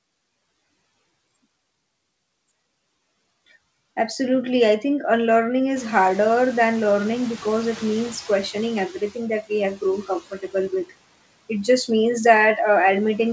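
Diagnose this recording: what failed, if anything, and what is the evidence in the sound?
The noise suppressor in the call processing stage was slow to track a change in the background. After "I think unlearning", the room noise jumps by about 23 dB at roughly 6 s, but the suppressor's noise estimate lags behind. From 5.75 s the noise comes through with less reduction, then sinks by about 8 dB as the estimate adapts over 3.24 s. This noise suppressor catching up ends by 8.99 s, just before "that we have".

Shortly afterwards the same suppressor misjudged part of the speech as noise. Right after "that we have", between 9.75 and 10.09 s, it pulled the gain down along with the newly louder background, cutting as deep as about 11 dB over roughly 150 ms in total. The result is speech cut by the noise suppressor: a soft stretch sounds swallowed and faint against the background, which remains about 20 dB below the speech. 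The G.722 call codec's limit of nothing above 8 kHz can be heard throughout.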